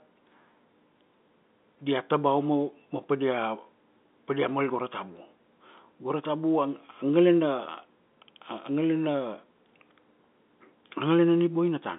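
No technical faults occur at any point in this speech recording, which carries the narrow band of an ordinary telephone line.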